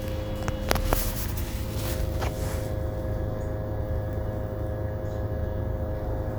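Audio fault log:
Nothing stood out on listening to this recording of sounds.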